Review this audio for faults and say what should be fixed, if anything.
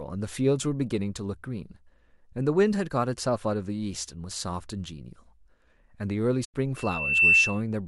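Corrupt frame concealed, 6.44 to 6.54 s: flipped bits damaged a short run of AAC frames, and the decoder detected the damage and substituted its own fill rather than decoding garbage. The 0.1 s gap fits roughly four consecutive frames. Adding error protection or retransmission on the transport link would keep corrupted frames from reaching the decoder.

Loudspeaker feedback squeal, 6.76 to 7.61 s: a microphone is picking up a loudspeaker that it feeds, and at 2.7 kHz the loop gain rose above one, so that frequency kept reinforcing itself. The sound is a single tone that swells over about half a second into a steady squeal, ending up roughly 10 dB above the speech before it stops at 7.61 s. Lowering monitor gain, moving the microphone out of the speaker's coverage, or notching 2.7 kHz would prevent it.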